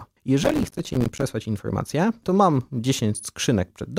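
From 0.43 to 1.23 s a gritty burst of crackle tears through the sound, then stops abruptly. This is processor overload crackle: the processor kept missing deadlines for its short audio buffers, around 5 ms each, and dozens of them were dropped as tiny hard-edged silent gaps.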